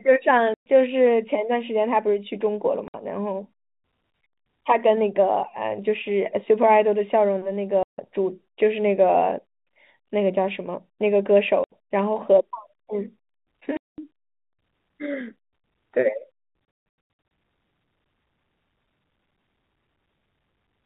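Packet loss filled with silence at 0.54–0.66, 2.88–2.94, 7.83–7.98, 11.64–11.69, 13.77–13.98 and scattered across 16.65–17.31 s: dropped packets replaced by hard-edged dead gaps, sized in steps that fit 30 ms packets.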